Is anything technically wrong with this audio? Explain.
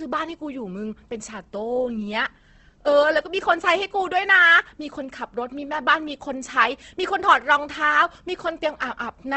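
Yes, there's Opus compression damage running through the whole clip, and it's plainly audible. The speech sounds grainy and rough rather than swirly, and nothing comes through above about 8.2 kHz, so the top end feels shut off. That's likely a low-bitrate Opus encode in its music-style mode, somewhere around 16 kbps. At that rate it preserves each band's energy but fills detail with folded or noise-like content, which is where the graininess comes from.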